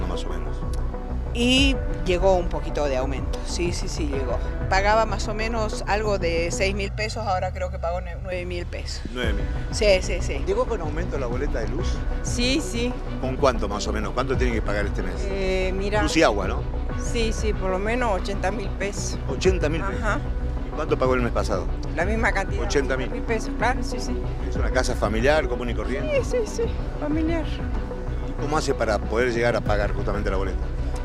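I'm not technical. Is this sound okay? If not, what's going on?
No. Channel delay (comb filtering) from 6.87 to 8.32 s: one side arrives about one and a half milliseconds late, and when both sides are combined, matching parts cancel at evenly spaced pitches starting near 300 Hz, leaving the sound hollow and phasey.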